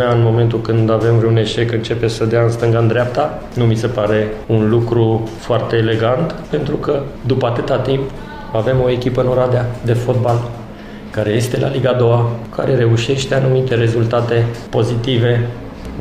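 No technical faults can be heard anywhere in the clip.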